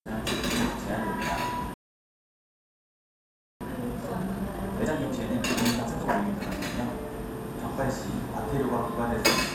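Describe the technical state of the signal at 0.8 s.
At 0.8 s the sound is hit by DAB burbling, running from 0.80 to 0.98 s. Residual bit errors at a rate of a small fraction of a percent slip past error correction into the MP2 data, corrupting samples, which puts short blips of noise into single sub-bands, and scale factors, which make sub-bands jump in level for up to a frame. The result is short bursts of sub-band noise across what sounds like roughly ten damaged frames.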